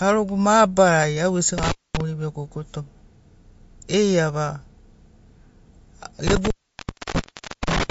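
Throughout the speech, nothing sounds above 7.6 kHz, and the sound is plainly watery and swirly. This is likely MP3 compression at a low bitrate, around 48 kbps. At 1.58 s, just after "mabarari au gesi", an intermittent contact drops the sound for about 0.23 s, with crackle at both edges. It cuts out again at 6.27 s for about 1.2 s and runs to the end.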